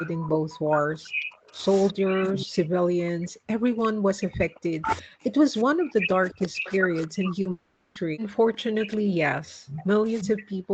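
From the first instant a delayed copy of the speech returns about 360 ms behind it, at 0.0 to 0.1, 0.77 to 1.09, 1.8 to 2.46, 3.83 to 5.01, 6.0 to 7.3, 8.8 to 8.96 and 9.67 to 10.42 s. This is echo leak, sitting roughly 5 to 20 dB under the speech, most noticeable around 6.0 to 7.3 s. It is likely far-end loudspeaker pickup that the echo canceller left in place.

From 0.03 s to the end, the speech keeps dipping, at its deepest by about 40 dB, and loses its top in pieces. This is speech suppressed in double talk. The likely cause is that the canceller could not tell the local talker from the returning echo and attenuated both.

At 7.41 to 7.47 s, a short concealed packet loss fills a 40 ms gap by extending the preceding sound, giving a brief smear.

From 7.51 to 7.97 s, a long network dropout follows. The receiver continues the last sound as a fading buzz for 440 ms, likely because no packets arrived. 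The speech then resumes with that stretch missing.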